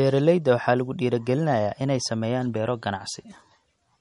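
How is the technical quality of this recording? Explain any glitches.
The recording's quality is limited by compression throughout. The speech has plainly audible watery, swirly artefacts and no content above 11.1 kHz, likely MP3 compression at a low bitrate near 47 kbps. A spectrogram shows a hard ceiling at 11.1 kHz and flickering high-frequency patches.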